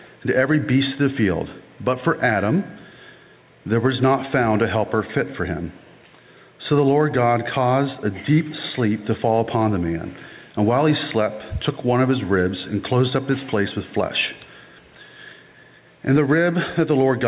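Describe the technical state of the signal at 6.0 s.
At 6.0 s the audio shows gain pumping, which runs through the whole clip. The level ducks under each loud sound, by around 5 dB. The likely cause is input gain set far too high, with a fast limiter pulling it down.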